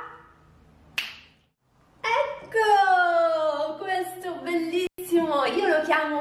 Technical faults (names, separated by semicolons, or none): intermittent contact